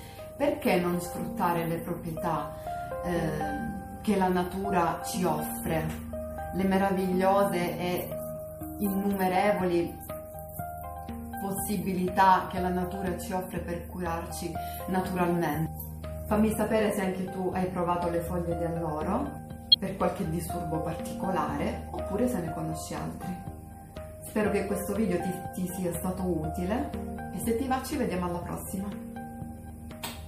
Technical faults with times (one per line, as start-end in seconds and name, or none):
0.00-30.27 MP3 compression
19.72-19.76 corrupt frame decoded